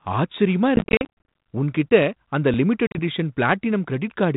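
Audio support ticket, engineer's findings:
Choppy gaps 0.76–1.06 s: about 280 ms of holes scattered across 520 ms, none longer than 40 ms, hard-edged silence, then slightly distorted speech on return. Packet loss on the ADPCM call, G.726 at 32 kbit/s, likely around thirty dropped packets.

Second dropout 2.87–2.99 s: 70 ms missing within 80 ms, longest hole 40 ms. Same mechanism: predictor and step size desync after each gap, so audio resumes distorted before settling.

Brief glitch at 2.54 s, no audio missing. Repeated buffer: output device replayed the previous 2.9 ms block once when fresh data arrived late. A block that short fits a 128-sample buffer, so the repeat is a click or brief buzz rather than a stutter.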